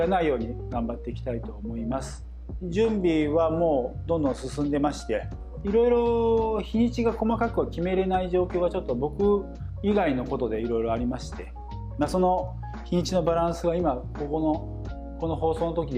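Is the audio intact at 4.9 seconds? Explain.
No. A ground loop or stray coupling from a nearby transformer is feeding the 60 Hz power line into the signal path, so at 4.9 seconds, as through the whole clip, there is mains hum. It sounds like a steady low drone at 60 Hz with a few low harmonics above it. It sits only around 15 dB below the wanted sound.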